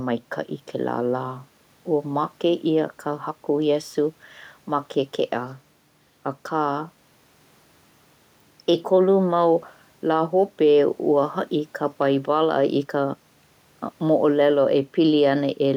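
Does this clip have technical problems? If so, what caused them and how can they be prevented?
No, there's nothing wrong with this one technically, just a bit of quiet room noise sitting about 41 dB below the speech, which is simply part of the space the microphone was in.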